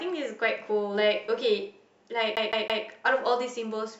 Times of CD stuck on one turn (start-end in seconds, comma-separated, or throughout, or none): 2.36-2.84